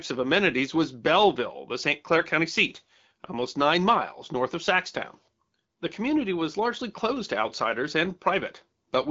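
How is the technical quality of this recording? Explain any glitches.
The recording has one clear glitch: a short burst of AMR bit errors from about 2.16 to 2.24 s. It runs roughly 84 ms, which fits about four 20 ms frames getting hit. A few percent of the less-protected bits in those frames arrived flipped, but the checksum on the critical bits still passed, so the decoder used them anyway. The excitation pulses landed in the wrong spots and the fine pitch, gain and spectral values were off. The speech holds its rough pitch and level there but goes briefly hoarse and gargly. Around it, the AMR-WB coding at 12.65 kbit/s leaves only light codec colouring.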